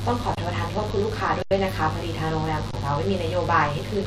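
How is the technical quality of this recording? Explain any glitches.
The speech has two problems: a constant buzz and three brief freezes.

Mains buzz runs the whole way through, about 20 dB below the speech. Sharp switching spikes twice per 50 Hz cycle stack harmonics well up into the kilohertz range. You hear it as a steady, raspy buzz under everything.

Underrun with held sample happens at 0.35 to 0.37 s, 1.42 to 1.51 s and 2.71 to 2.73 s. The output buffer ran dry and the converter held its last value. The sound goes flat for 23 ms, 86 ms and 23 ms, then picks up where it stopped. The 23 ms gaps fit a 1024-sample buffer. Each gap is a small hiccup with a soft restart, not a hard click.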